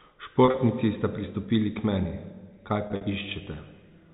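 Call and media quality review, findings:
Packet loss with pitch repetition, 0.45–0.57 s, just before "sta pristopili k meni": about 70 ms lost across 120 ms, longest gap 30 ms. Receiver concealment repeats the last pitch period, giving a brief buzzy, held tone rather than a silent dropout.

Same fault, 2.87–3.03 s: about 100 ms lost across 160 ms, longest gap 50 ms, which fits 10 ms packets. The held pitch fades toward silence, then cross-fades back. That repeated-period buzz separates it from jitter-buffer stretching or a clean mute. Band-limited G.711 A-law path audible underneath.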